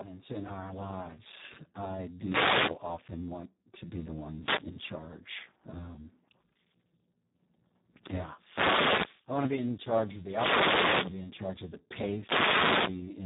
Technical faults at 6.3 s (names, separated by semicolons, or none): Speex codec